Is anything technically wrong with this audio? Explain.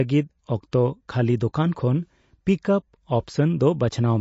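Yes. Throughout, the speech has been squeezed by what is likely MP3 compression, consistent with a low bitrate around 32 kbps. Nothing survives above 7.6 kHz, and the sparse bit allocation leaves a plainly audible watery, swirling texture. Pre-echo appears at 0.71 s and 1.40 s. Quantisation noise spread across a transform block leaks before sharp attacks, giving a short hiss about 16 ms and 12 ms ahead of each onset and softening it.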